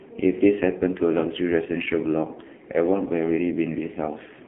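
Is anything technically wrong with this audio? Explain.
Yes. The whole clip has been through an AMR narrowband mobile codec. The sound sits in a phone-line band of roughly 200 Hz to 3.4 kHz, with nothing above 3.6 kHz. AMR-NB rebuilds speech from a vocal-tract model excited by a few pulses per short subframe. Here the codec damage is heavy, which fits one of its lowest modes, around 5.9 kbps. The speech comes out thin, buzzy and noticeably synthetic, like a poor mobile call.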